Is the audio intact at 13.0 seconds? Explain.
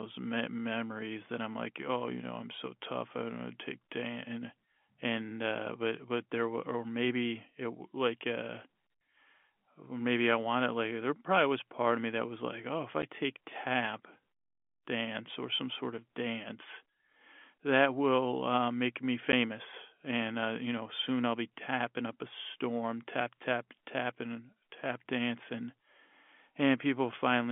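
No. At 13.02 s, between "was like oh if" and "take tap", there's packet loss filled with silence: a 10 ms hole, which fits one lost packet. Its edges are hard, unlike concealment, which would smooth the gap over.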